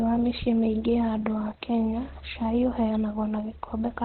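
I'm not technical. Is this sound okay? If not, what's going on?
No. From start to finish the speech sounds muffled and hoarse, as if heard over an old telephone line: the crisp, airy top of the sound is missing and the voice has a rough, buzzy edge. This is most likely heavy Opus compression, squeezed so hard that the encoder switched to its narrow, telephone-quality speech mode. Unlike MP3-style damage, there's less watery swirling or warbling. The sound is simply dull and coarse throughout.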